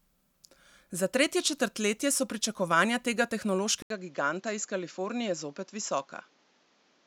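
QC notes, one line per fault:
3.82 to 7.06 s, input switched to a poorer device: the system likely changed its input mid-recording to a lower-grade microphone. After an 80 ms silence at the switch, the speech loses all content above 7.6 kHz and turns duller and boxier. Its level falls by roughly 5 dB, and a new background noise floor appears, sitting around 35 dB under the speech. The narrower, quieter sound and different character continue to the end.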